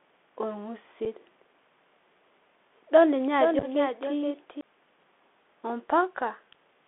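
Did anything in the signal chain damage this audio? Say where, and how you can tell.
Yes. At the codec stage, a Bluetooth CVSD headset codec confines the whole clip to about 250 Hz to 3.5 kHz, with gritty sibilants and granular hiss from its one-bit delta modulation.

On the wireless link, unconcealed Bluetooth headset packet loss leaves an abrupt 7.5 ms hole at 1.05 s, then scattered gaps totalling 26 ms between 3.59 and 3.65 s.

From 3.39 to 4.61 s a doubled audio track appears: a dry full-band copy about 5 dB down, roughly half a second late, starting and stopping abruptly, likely a second capture path.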